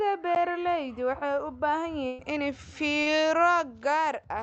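At 0.35 s the speech drops into a block of digital silence about 11.6 ms long, which fits a 512-sample buffer that wasn't filled in time. The sound cuts straight out and straight back, so it sounds like a single sharp tick rather than a gap. Unlike packet loss concealment, nothing is continued or faded across the hole: it is true silence with hard edges.

From 2.07 to 2.22 s comes a burst of packet loss, about 120 ms of audio that never arrived. The receiver filled roughly 113 ms of it by extending the last sound and letting it decay, so a held buzz or hiss fades before the speech resumes further along, with that stretch missing. Its length and audible fade set it apart from the brief silent dropout earlier.

Between 3.03 and 3.20 s there is a short concealed packet loss: around 40 ms missing, with about 34 ms synthesised from the preceding pitch or noise and then blended back into the real signal, adding a few milliseconds in the process. 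It comes across as a quick smear or wobble rather than a sustained fade. Compared with the burst at 2.1 s, it is too short to become a held buzz, and unlike a zeroed block it leaves no silent hole. All of this sits within the Opus call path's band limit at 8 kHz.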